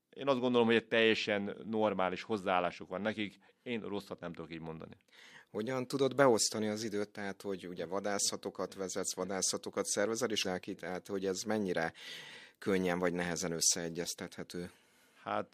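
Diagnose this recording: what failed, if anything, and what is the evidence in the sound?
Codec stage: there's damaged data in the compressed stream. At 10.41 to 10.45 s, right after "vadászatokat vezetsz vadászatokat szervezel", the speech breaks into a brief glitch, and again at 14.03 to 14.06 s. Corrupt bytes threw the decoder off sync until it found the next frame header.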